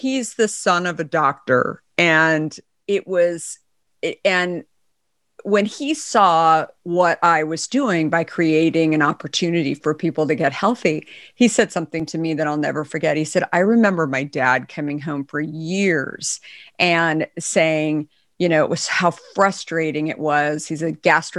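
Drift correction steps at 0.63 to 2.75 s and again at 13.65 to 14.64 s: the speech suddenly slows by about 5.7 percent and drops about a semitone in pitch, speed and pitch moving together, then snaps back to normal. Both shifts are the same size, likely from clock-matching software changing the playback rate in one step to rebalance its buffer before restoring the original rate.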